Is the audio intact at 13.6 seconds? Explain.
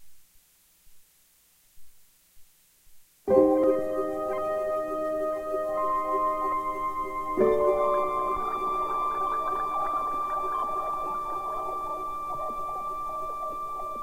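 Yes, the audio at 13.6 seconds is intact, with no dropout, click, distortion or other fault at that moment.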